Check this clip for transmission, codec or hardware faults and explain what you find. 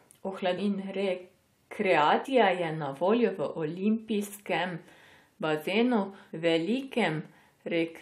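One fault is audible: a short stretch of compressed frames skipped at 2.24 s, just before "je na voljo". Whole frames were dropped, either missing or rejected by the decoder as damaged, so the speech jumps ahead by about 70 ms, which points to about three frames of 23.2 ms. Overlapping neighbour frames soften the join into a brief smeared blip rather than a click. A spectrogram shows a sudden discontinuity in the harmonic traces with a faint vertical smudge, and the waveform shows an abrupt shape change without a sharp spike.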